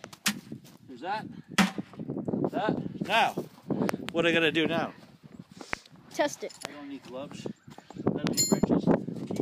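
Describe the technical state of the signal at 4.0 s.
A loud pop from 3.89 to 4.11 s, likely a brief voltage surge, adds two sharp thumps rising around 20 dB above the sound, which continues underneath.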